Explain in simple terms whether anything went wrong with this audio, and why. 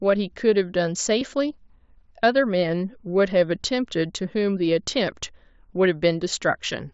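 Concealed Bluetooth headset packet loss occurs at 1.2 s and 4.24 s, in gaps of 15 ms and 7.5 ms. Audio travelling from headset to phone went missing, and the phone patched each hole by repeating a closely matching stretch of the sound just before, so the single loss at 4.24 s is nearly hidden.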